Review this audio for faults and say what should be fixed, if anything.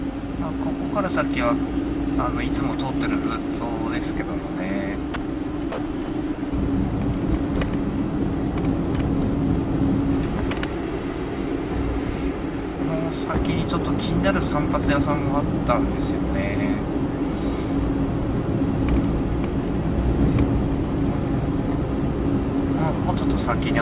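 Sound dropped by the voice detector occurs six times: 5.14–5.16 s, 5.72–5.78 s, 6.06–6.08 s, 6.34–6.38 s, 6.50–6.52 s and 12.76–12.78 s. Each gap is short, 20 to 60 ms. The sound briefly gives way to flat comfort noise, then returns. The likely cause is the sender's detector misjudging quiet passages as background and pausing transmission. The cluster near 6 s shows repeated on-off switching. The band stops at 4 kHz, consistent with a G.711 call path. To prevent this, lower the detector's threshold or add hangover time, or disable discontinuous transmission.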